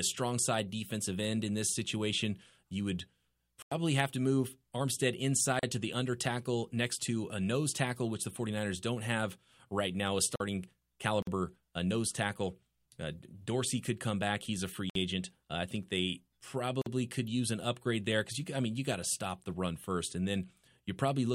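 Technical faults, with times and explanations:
3.62 to 3.72 s, 10.36 to 10.40 s and 14.90 to 14.95 s: block of digital silence. The speech drops to silence for about 93, 45 and 56 ms, the first fitting a 4096-sample buffer left unfilled, and it cuts out and back with hard, unfaded edges.
5.59 to 5.63 s, 11.22 to 11.27 s and 16.82 to 16.86 s: gap at a join of encoded pieces. Holes of about 37, 49 and 47 ms open where separately encoded segments were butted together untrimmed, leaving encoder delay and final-frame padding, with smeared edges.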